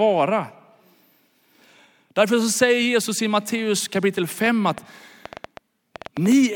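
From 4.46 to 6.33 s a train of clicks runs over the speech: about fifteen similar pops at roughly six a second, unevenly spaced, peaking about 10 dB above the voice. It's likely interference from nearby gear or a faulty connection or power supply.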